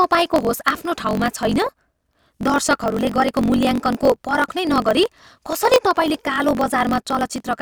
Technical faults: block size mismatch (truncated)

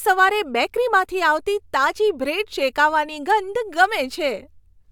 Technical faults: none

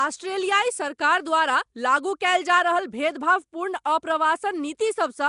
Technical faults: Nellymoser compression; pre-echo

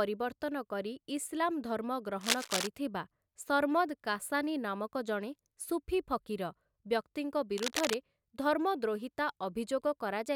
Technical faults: cable scratch noise

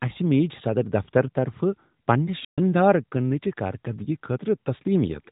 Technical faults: playback stall

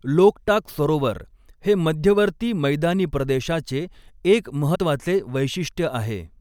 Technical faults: broken MP3 bit reservoir

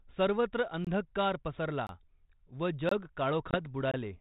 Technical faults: gap between chunks; packet loss on an ADPCM call

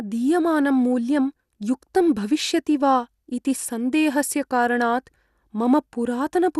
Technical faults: MP2 compression

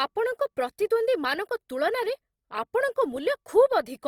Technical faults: Opus compression

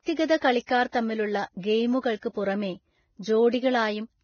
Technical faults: Vorbis compression; pre-echo

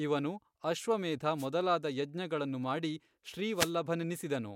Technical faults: wireless microphone noise hit

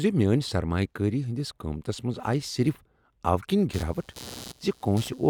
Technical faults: computer activity noise

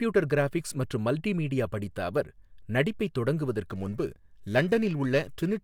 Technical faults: periodic clock jitter

